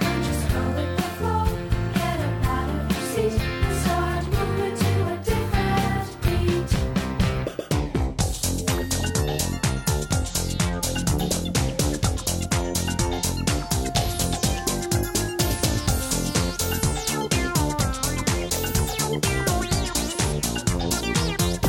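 No faults can be heard anywhere in this recording.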